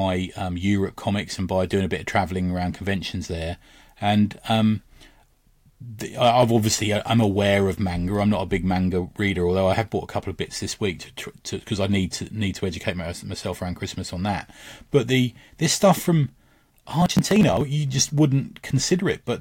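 Speech with processor overload crackle from 17.02 to 17.61 s, just before "you just": the processor kept missing its deadlines for small buffers of around 10 ms, around fifteen of them, and each missed buffer was skipped, leaving hard-edged gaps that merge into a gritty crackle across the sound until the load eases.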